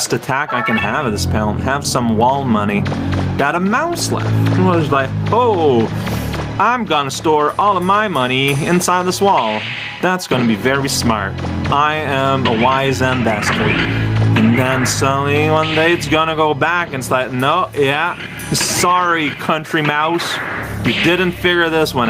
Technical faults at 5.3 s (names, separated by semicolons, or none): gain pumping